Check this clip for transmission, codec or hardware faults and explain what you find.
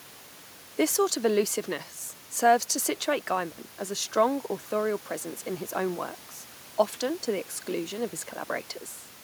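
One hardware fault. From 3.51 to 3.58 s, an intermittent contact cuts the speech for 59.5 ms. A loose connection opens briefly, leaving crackle at both edges and faint hiss.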